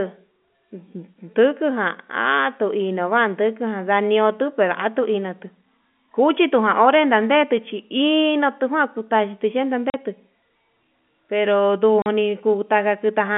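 Packet loss filled with silence at 9.90 and 12.02 s: two 40 ms holes in the speech, which fit two lost 20 ms packets each, with hard edges over the narrow telephone band.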